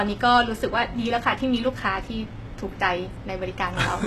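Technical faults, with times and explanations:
Throughout, HE-AAC compression: s sounds turn gritty and lispy, with nothing above 12.3 kHz. Likely low-bitrate coding, about 16 kbps, rebuilding treble from copied lower bands.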